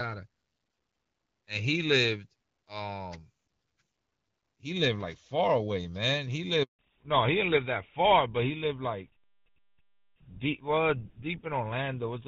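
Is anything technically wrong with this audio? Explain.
Yes, there are two related faults in this speech recording.

Handover gap: from 6.63 to 6.79 s the audio drops out for about 160 ms. The call appears to have been passed from one network to another, and no speech frames were delivered while the link changed over. The sound fades within a few tens of milliseconds, stays silent until the new connection carries audio, and whatever was spoken during that interval is simply missing.

Fallback to narrowband: from 6.79 s to the end, nothing above 4 kHz remains. Before the gap the call carried wideband speech, consistent with AMR-WB (HD Voice) at a mid rate, clear with only light coding damage. After the handover the signal points to an older narrowband codec such as GSM full rate. Losing the upper band makes the speech duller, and the older coding adds a rougher texture.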